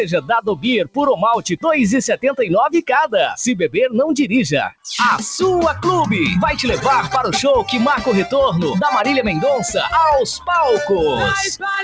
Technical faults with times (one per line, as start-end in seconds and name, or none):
0.00-11.83 noise suppressor applied to music or sounds
1.42-1.65 sound cut by the noise suppressor
4.69-4.86 sound cut by the noise suppressor